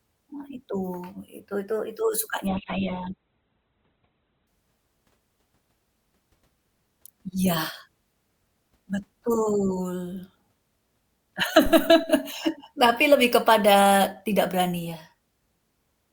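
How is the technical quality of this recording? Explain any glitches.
The recording has two glitches. From 2.47 to 4.47 s, just after "itu itu", the adaptive stream switches to a lower bitrate because the connection slowed. The speech suddenly loses everything above 4.2 kHz and turns dull, which fits a drop from a mid-rate Opus stream to a very low one, with no gap at either change. At 11.66 s a phantom power thump occurs when a supply is switched on a live input and the voltage step passes through the coupling capacitors. It sounds as a deep low thud that dies away over about 107 ms and is gone by 12.14 s.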